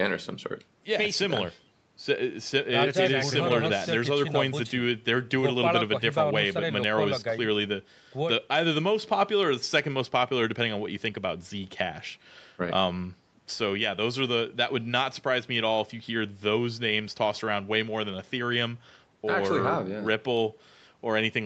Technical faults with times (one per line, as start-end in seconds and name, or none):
none